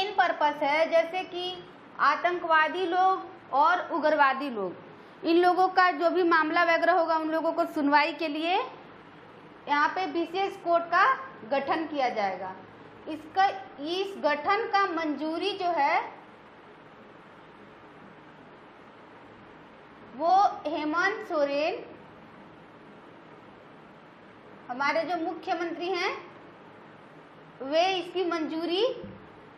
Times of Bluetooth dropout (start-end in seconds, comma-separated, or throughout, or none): none